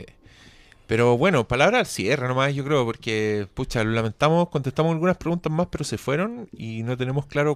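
No technical faults can be heard anywhere in this speech recording. Nothing breaks, jumps or changes in the signal at any point.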